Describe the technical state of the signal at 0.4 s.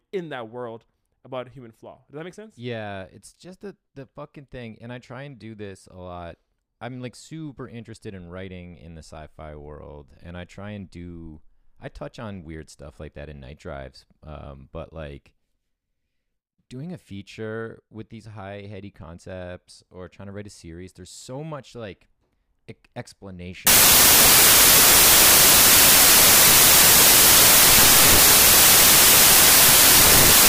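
At 0.4 s the signal is intact, with no audible technical fault at that moment.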